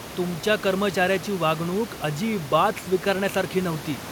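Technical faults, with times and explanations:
The speech signal shows no technical faults, with the room's own background noise sitting about 16 dB below the speech as part of the recording.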